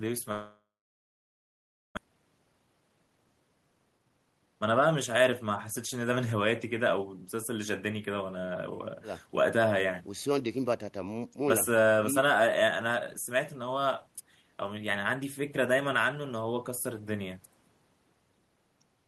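From 0.31 s the speech cuts out until 1.99 s: a brief buzzy continuation of the last sound fades, then about 1.3 s is left silent. That's likely a long network dropout. Around a second of speech never arrives, and the audio resumes past the gap.

Right after, from 2.06 s to 6.40 s, there's a jitter buffer speed-up. The receiver trims tiny pitch-period chunks over and over to shed the built-up delay, roughly 0.7 s in total, so the speech runs at 114% speed, hurried but at unchanged pitch.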